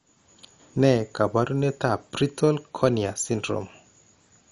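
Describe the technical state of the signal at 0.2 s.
At 0.2 s the speech has a dull, gurgling, granular edge, the likely result of MP2 compression. It runs throughout the clip. Upper sub-bands are starved of bits, so nothing survives above 11.3 kHz. That fits a low bitrate near 48 kbps.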